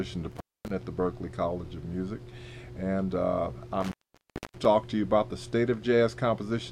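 At 0.31 s and again at 3.81 s, the sound drops out from intermittent contact. A loose connection opens for about 0.25 s, then 0.63 s. Crackle marks each break's edges. Faint hiss fills the gap until contact returns.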